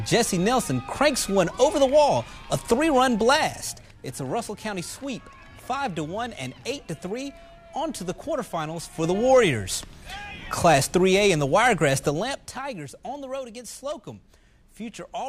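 Zipper noise appears at 3.24–4.01 s, 8.88–9.22 s and 12.03–12.63 s. The level jumps in unsmoothed 3 dB steps, several per second, and each jump ticks audibly.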